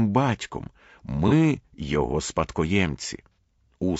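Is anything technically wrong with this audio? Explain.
Yes. Throughout, the speech sounds rough and grainy, with noise filling the gaps between harmonics and a thin, synthetic-sounding top band. This is likely low-delay AAC compression (AAC-ELD) at a low rate, around 32 kbps. Its short frames resolve pitch harmonics poorly. The damage is constant, so it is not a transient dropout.

At 1.28 to 1.33 s and again at 3.32 to 3.35 s there are brief smeared, noisy patches from AAC frame loss with concealment. The decoder rebuilt the missing audio from the last good spectrum. Unlike the steady compression grain, these are isolated. They are also too short to fade to silence, so they are not gaps.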